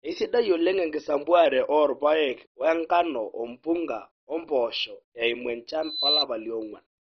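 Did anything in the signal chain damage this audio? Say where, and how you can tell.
Yes. The whole clip is dull and gurgling, with nothing above 6.1 kHz, which points to MP2 compression at the codec stage, likely at a rate near 32 kbps. Starved sub-bands switch off, and a spectrogram shows a hard ceiling with flickering, blocky upper bands.

From 1.46 to 2.29 s, speed drops about 6.5% and pitch falls about 116 cents, then snaps back. This is likely a drift correction step in the buffer stage, where clock-matching software resampled to manage buffer fill. A pitch-tracked spectrogram shows harmonics stepping down and back up.

Right after "ompunga o mpoosho eimu", a loudspeaker feedback squeal runs from 5.82 to 6.26 s. It is a 4 kHz tone swelling over about a third of a second to roughly 5 dB above the speech, from an acoustic mic-to-speaker loop at the analogue stage. A spectrogram shows one brightening horizontal line, and the waveform's envelope balloons.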